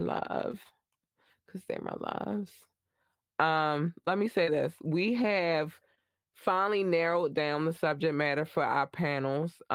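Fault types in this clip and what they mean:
Nothing to flag in this one: the speech comes through without any faults, carried by Opus voice compression at 24 kbps doing its normal job.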